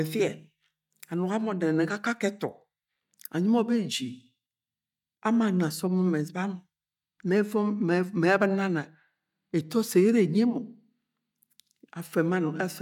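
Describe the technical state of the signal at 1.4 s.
At 1.4 s the speech signal is intact, with no audible dropout, distortion, glitch or other technical fault at that moment.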